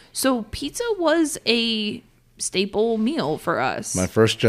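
No technical faults can be heard in this speech.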